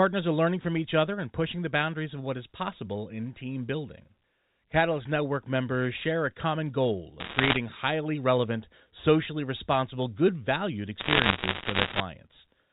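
From 7.20 to 7.57 s, a burst of sharp ticks sits on top of the speech. These are bit errors on a digital phone line. Single bits in the 8-bit A-law samples get flipped at a rate of around two percent. Each flip corrupts one sample. Hits on the high bits, or on the sign of loud samples, jump far from the waveform and click. A second, longer crackle runs from 11.0 to 12.0 s. The telephone-band G.711 coding under the crackle adds at most a faint noise.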